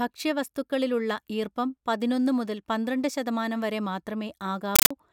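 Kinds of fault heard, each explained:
Compressed stream played as audio: from 4.76 to 4.91 s, an undecoded Dolby Digital bitstream is output as raw samples. Each frame becomes a 9.3 ms noise burst followed by silent padding, repeating 31.25 times a second, which replaces the speech with very loud, chattering static.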